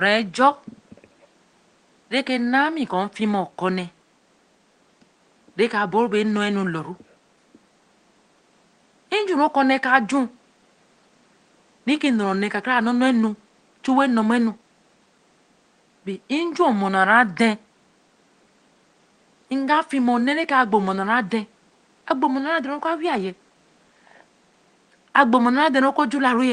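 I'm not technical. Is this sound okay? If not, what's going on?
Yes, nothing has gone wrong with this speech recording. A faint background noise of the room sits quietly far beneath the talking, and because it travelled over an internet call, the very highest frequencies above about 12 kHz are trimmed away, just as on any ordinary call.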